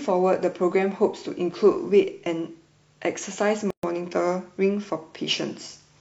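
At 3.70 s speech halts 129 ms, a gap at a join of encoded pieces from leftover encoder padding; unlike dropouts, nothing is skipped.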